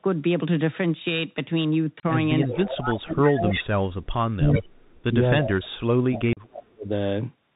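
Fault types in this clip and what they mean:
Bluetooth CVSD headset codec: The speech is narrowband throughout, with nothing audible above 4 kHz, a granular hiss under the voice, and scratchy, overloaded sibilants where loud high sounds outrun the one-bit delta modulator's adapting step size at 64 kHz.
Unconcealed Bluetooth headset packet loss: Two short, hard-edged holes, 30 ms at 2.00 s and 37.5 ms at 6.33 s, break the speech with no smoothing. Their lengths fit runs of roughly four and five lost headset voice packets replaced by silence or an idle pattern.
Echo leak: A delayed copy of the speech trails it by 331 ms in scraps at about 2.42, 3.51 and 4.52 s, at about -10, -5 and -15 dB relative to the speech. The likely cause is a loudspeaker echo canceller letting residual echo through.
Speech suppressed in double talk: The speech dips sharply, by as much as about 35 dB, across roughly two seconds from 2.44 to 4.95 s, and again at 5.39 to 5.83 s and 6.08 to 6.9 s, likely an echo canceller attenuating overlapping talk it could not separate.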